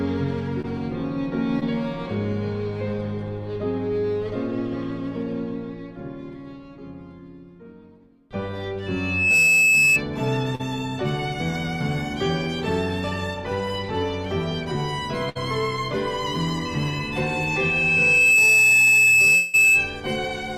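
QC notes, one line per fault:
0.61 s, 1.60 s and 10.55 to 10.61 s: short concealed packet loss, brief smears where 20 to 40 ms went missing and the decoder stretched the preceding sound across the hole.
8.86 to 10.02 s and 16.65 to 20.01 s: loudspeaker feedback squeal, a 2.6 kHz tone swelling to about 10 dB over the audio, rising in about half a second the first time and over roughly a second and a half the second, as the mic re-amplifies its own loudspeaker.
15.29 to 15.37 s: burst of packet loss, a held, fading continuation of the last sound covering 60 ms of lost audio, which then resumes with that stretch gone.
19.35 to 19.55 s: long network dropout, likely, heard as about 180 ms of concealment, a fading buzz or hiss under the squeal, with audio resuming after the gap.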